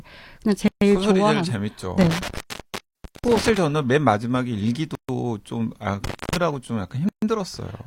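This speech clip drops into short silences at 0.68, 2.82, 4.95 and 7.09 s, each about 136 ms long and smeared at the edges, after which the speech resumes exactly where it stopped. These are gaps at a join of encoded pieces: the audio was encoded in 2 s chunks and stitched together untrimmed, so each join keeps the encoder's start-up silence and last-frame padding. Separately, between 2.01 and 3.57 s and again between 6.04 and 6.36 s, the sound cuts out with crackle at the edges, leaving faint hiss for about 729 ms and 255 ms respectively. That is an intermittent contact, where a loose cable or plug momentarily breaks the signal path.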